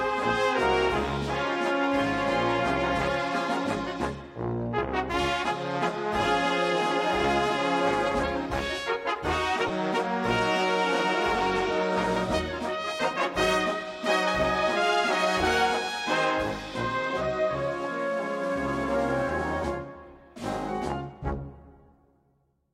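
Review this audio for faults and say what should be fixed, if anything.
At 9.67 to 9.69 s there is a short glitch lasting about 26 ms: a corrupt frame decoded. Bits inside a single compressed frame were damaged and the decoder played it anyway, so misread gains and codes put energy at frequencies unrelated to the surrounding audio, peaking around -15 dBFS. A spectrogram shows a narrow vertical block of misplaced energy. The waveform shows a brief burst that doesn't follow the neighbouring signal. Use checksum verification with concealment or retransmission of damaged frames so they are never played as received.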